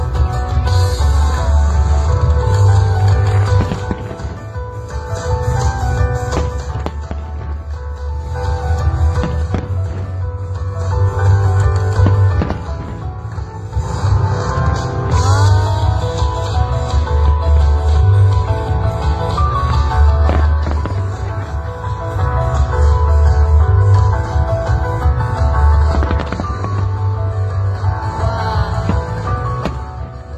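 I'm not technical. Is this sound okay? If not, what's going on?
Yes, this sound is okay, and nothing is going on with it that needs fixing.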